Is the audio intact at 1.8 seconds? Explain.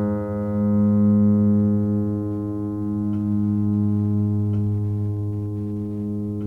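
Yes, the music plays through 1.8 s without any audible fault.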